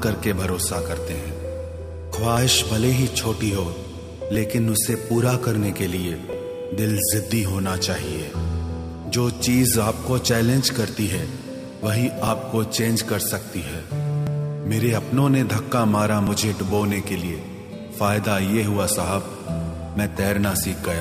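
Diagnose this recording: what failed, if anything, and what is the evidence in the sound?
At the playback stage, the overlap between stream segments was mishandled: timestamps of adjacent segments overlapped, so the player trimmed audio that was never duplicated. Each discontinuity is heard as a tiny click or skip, at 4.35, 6.33, 14.27 and 16.27 s, falling on boundaries of the 2.0 s segments.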